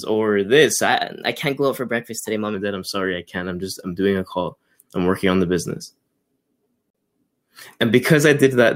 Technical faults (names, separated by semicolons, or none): wrong sample rate